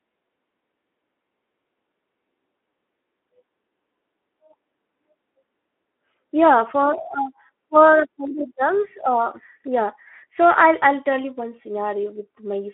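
Speech the whole way through, and it's carrying the sound of the Speex codec from start to finish. The band sits between about 250 Hz and 3.4 kHz, so it has that thin phone-line feel. The real damage is the coding itself. The speech comes out plainly hoarse and noisy, because the codec is starved of bits for the excitation signal. That fits a low Speex setting of around 11 kbps.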